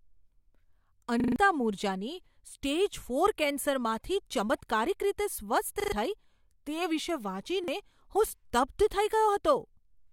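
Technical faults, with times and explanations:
1.20–1.36 s, repeated buffer: a short slice of speech stutters several times just before "મૂરજાની સ્ટેજ ફોર કેન્સરમાંથી". New audio arrived late, so the device replayed its last block. The repeats fall about 40 ms apart, which fits a 40 ms buffer. Each join is hard, and roughly 150 ms of real speech is lost.
5.80–5.92 s, repeated buffer: the same stutter follows "ફોર કેન્સરમાંથી ચમત્કારિક રીતે". It is shorter, and about 100 ms of speech goes missing.
7.64–7.68 s, repeated buffer: a single 40 ms repeat gives a brief doubled catch.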